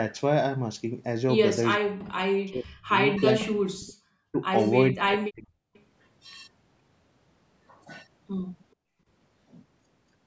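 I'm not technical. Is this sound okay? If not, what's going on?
No, there are a few problems, all from the system that keeps a speakerphone call from echoing.

First, speech suppressed in double talk. From 1.76 to 2.95 s, 3.37 to 3.99 s and 4.93 to 5.57 s the voice sinks until it nearly vanishes, and around 4.32 s there's a brief, milder dip. This is likely the other person talking at the same moment. The echo canceller couldn't tell the voice from the echo, so it turned everything down.

Next, an echo leak. At about 5.74 to 5.83 s you can hear a faint, short scrap of the voice coming back, delayed by roughly 430 milliseconds. It's very quiet, like a ghost of what was just said. It's likely the far end playing the call through a loudspeaker, with its echo canceller missing a bit of what the microphone picked up, so that piece got sent back.

Last, background gated by the echo canceller. 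From 8.75 to 9.07 s the room sound suddenly drops away for about a third of a second and then returns. The canceller clamped the microphone down hard while the loudspeaker was playing, and the background went with it until it let go.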